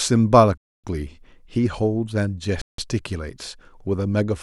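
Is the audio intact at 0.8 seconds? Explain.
No. The speech drops to silence from 0.58 to 0.84 s, a gap of 0.26 s, then resumes. This is likely a Bluetooth stall: interference delayed packets, the headphones' buffer emptied, and playback halted until retransmitted packets arrived.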